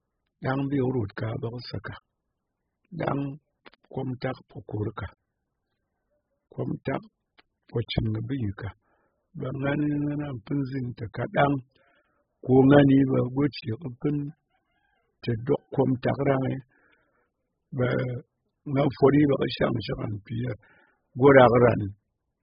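It's speech, and the whole clip has heavy AAC compression damage: nothing above 5 kHz, dull and smeared, likely a low-bitrate AAC-LC encode, which fits something down around 8 kbps.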